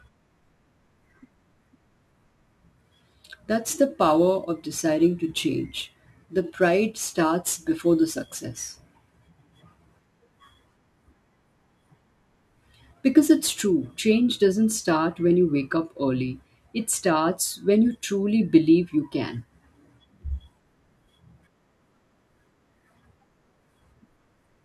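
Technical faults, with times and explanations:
0.00 to 13.61 s, crude rate conversion: unfiltered sample repeats, fitting a 44.1 kHz to 48 kHz change, add inharmonic fizz roughly 25 dB under the speech, ending before "change doesn't start when".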